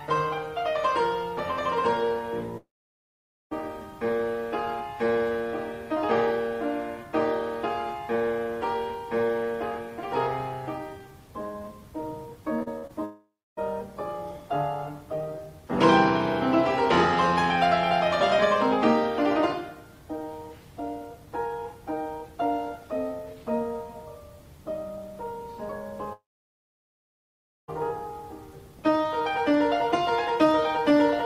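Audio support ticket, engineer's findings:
Long network dropout at 2.57–3.53 s, 13.05–13.59 s and 26.13–27.70 s: audio cuts out, last sound smeared into a fading buzz, then near-silence. Likely network path, with the receiver concealing the gap. Roughly 0.85 s, 0.28 s and 1.5 s go fully quiet before audio resumes, lost portion skipped.

Repeated packet loss (robotic sound) at 12.59–12.91 s: choppy stretch, four short holes, longest 48 ms, each patched by stretching the previous sound. Together about 120 ms gone, concealment covering 38% of that span, right before the second dropout.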